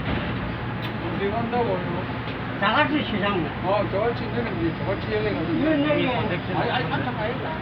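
This clip of everyday sounds has nothing technically wrong with it.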